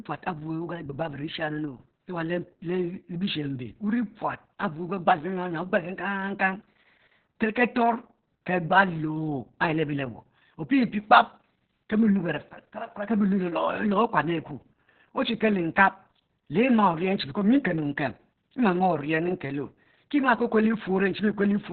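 Opus voice compression runs throughout this speech clip. Nothing survives above about 4.3 kHz, and coarse SILK excitation coding leaves the speech muffled, hoarse and robotic, which fits a narrowband setting near 6 kbps.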